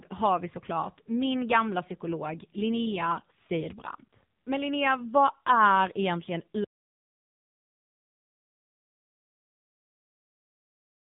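Throughout, the speech went through an AMR narrowband mobile codec at a low setting, with heavy damage that fits the 6.7 kbps mode. Its vocal-tract model, driven by sparse pulses, makes the speech buzzy and synthetic, and nothing above about 3.7 kHz survives.

At 6.64 s, just after "vad är egentligen", the input was lost, likely through a disconnected device or failed link, while recording continued writing silence. This audio dropout to silence cuts the speech off mid-flow and leaves dead digital silence, with no room tone, to the end.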